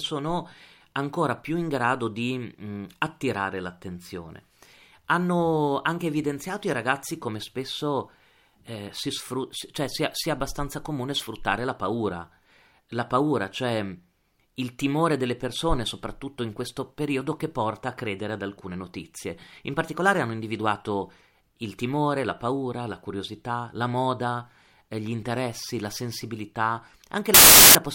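At 27.34 s, right after "gli interessi la sensibilità", the speech gives way to about 0.41 s of very loud white noise with hard edges, ending at 27.75 s. This is file tags played as audio: an embedded cover picture's compressed bytes were decoded as samples.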